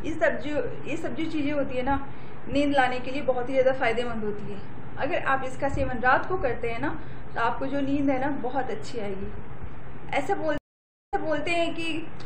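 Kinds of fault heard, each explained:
Stream reconnect: the connection dropped and a fresh decoder started mid-stream, leaving a 550 ms gap at 10.58 s, after which the sound resumes 0.28 s earlier.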